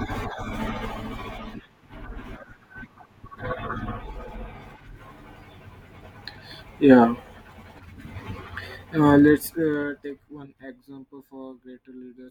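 From 9.06 to 10.45 s the speech drops by roughly 25 dB, and zipper noise rides on the fade. The gain moves in unsmoothed 2 dB jumps, about ten per second. Each jump leaves a small click. Together they form a ticking zip.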